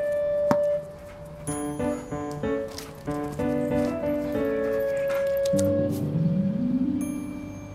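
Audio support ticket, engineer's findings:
No audible faults found: no dropouts, distortion or timing irregularities detected.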